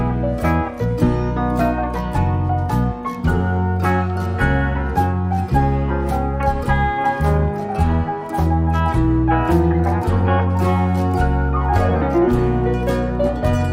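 No audible technical faults occur anywhere in this recording.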